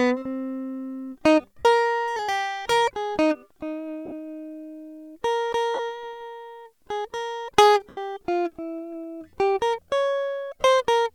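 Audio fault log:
1.60–1.65 s, 4.05–4.12 s, 5.74–5.79 s, 7.89–7.97 s, 10.61–10.64 s, lost LE Audio frames: In each gap the music turns into a brief noisy, smeared wash where held tones lose their clarity. The longest gap, near 7.9 s, is 82.5 ms and fades before the sound returns. At 4.05 s the gaps are scattered across 60 ms, with the longest about 30 ms. The LC3 decoder filled each gap by repeating the last spectrum with random signs and fading it. The gap lengths suggest 7.5 ms frames.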